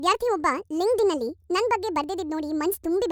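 Speech running too fast and too high for its entire length shows a wrong sample rate fault. Everything plays 1.5 times faster than it should, and pitch rises by about 7 semitones, roughly a perfect fifth, so voices sound chipmunk-like and hurried. Tempo and pitch move by the same ratio because the samples are clocked out faster with no resampling. A 1.5 ratio fits audio captured at 32 kHz and played back at 48 kHz.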